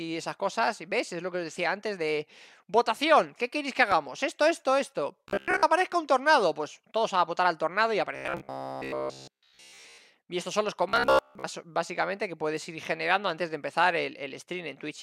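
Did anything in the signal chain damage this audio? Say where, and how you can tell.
Yes. A sharp loud pop sits on top of the sound from 3.92 to 3.94 s, peaking well above the programme level while the audio continues underneath. A single voltage step is likely, from a plug, switch, static or driver glitch in the analogue wiring or converter stage.

Three stretches take on a rigid, metallic buzz at 66.8 Hz: 5.28 to 5.63 s, 8.16 to 9.98 s, and 10.89 to 11.47 s. This is robotic sound from repeated short buffers, likely a driver or buffer stage starving and looping a segment of about 15 ms, so most of the real audio there is skipped.

At 9.09 s, inside the second buzzing stretch, a brief blip or squawk marks damaged data in a compressed stream. Corrupt frames made the decoder lose sync and jump ahead to the next valid frame, pointing to the codec, storage or network stage.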